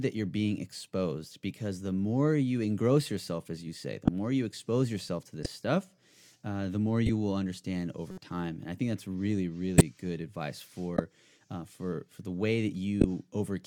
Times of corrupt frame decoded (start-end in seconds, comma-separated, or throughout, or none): 4.05-4.08, 5.43-5.46, 7.06-7.09, 8.11-8.18, 9.78-9.81, 10.95-10.99, 13.01-13.04